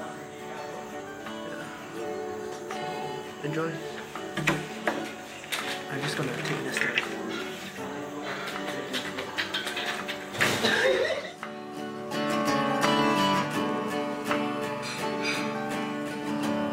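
Nothing technically wrong turns up anywhere in this audio; there's just no fault here to point to.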